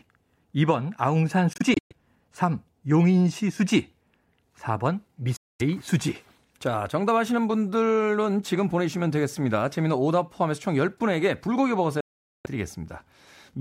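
Speech cuts out abruptly at 1.53 to 1.93 s in scattered gaps, at 5.36 to 5.62 s, and at 12.01 to 12.46 s. A Bluetooth dropout is the likely cause: late packets were discarded, so the sound skips ahead rather than pausing.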